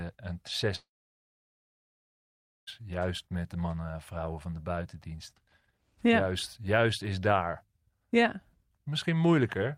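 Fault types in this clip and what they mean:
Long network dropout: 0.75 to 2.69 s, speech trails into a fading buzz then silence, likely lost packets; it resumes without the missing 1.9 s.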